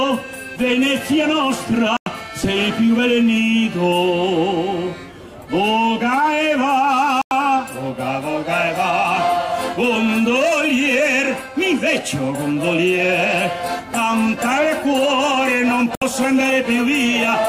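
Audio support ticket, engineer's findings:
Digital broadcast dropout at 1.97–2.07 s, 7.22–7.32 s, 15.95–16.02 s: receiver muting on failed frames. Gaps of about 96, 96 and 64 ms fit lost 32 ms frames. Full-band vertical blank stripes on spectrogram, flatlined waveform.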